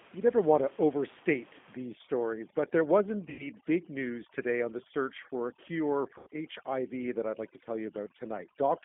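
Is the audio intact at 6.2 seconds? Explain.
No. From 6.18 to 6.28 s the sound smears into a fading buzzy tone or coloured noise. This is VoIP packet loss concealed by the speech codec: about 90 ms of audio went missing, and the decoder stretched its last pitch and filter while lowering the gain, so the sound stays weak just after.

Under this, as throughout, the audio is band-limited, slightly rough and synthetic. This is the G.729 codec at 8 kbit/s, which rebuilds the sound from a vocal tract filter, a pitch predictor and a few pulses per frame, passing only about 200 Hz to 3.5 kHz.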